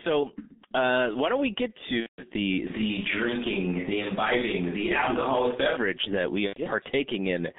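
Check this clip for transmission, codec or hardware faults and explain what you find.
The clip shows two faults: heavy G.723.1 codec damage throughout, and three dropouts covered by packet-loss concealment.

The G.723.1 codec affects the whole clip. The band runs only from about 200 Hz to 3.6 kHz, and the coarse 30 ms frames fit a low rate near 6 kbit/s. The slow-updating voice model leaves speech muffled and hoarse, with smeared consonants.

VoIP packet loss concealed by the speech codec occurs at 0.47–0.57 s, 2.01–2.24 s and 6.47–6.59 s. The decoder repeats its last pitch and filter at falling gain, so each gap turns into a fading buzzy tone or coloured noise. The 2.01 s gap is longest, fitting roughly six lost frames.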